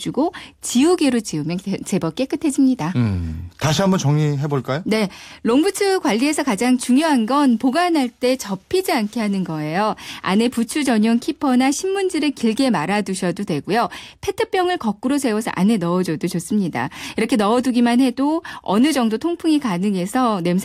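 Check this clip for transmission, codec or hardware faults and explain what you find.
Nothing stood out on listening to the recording; no problem could be heard anywhere in it.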